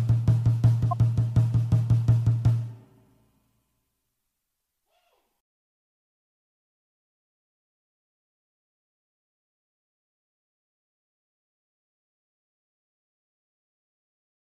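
At 0.91 to 0.93 s, a corrupt frame decoded: a few damaged compressed frames play as a brief chirp, squeak, blip or burst of noise around -15 dBFS, showing as misplaced spectral energy and a waveform spike.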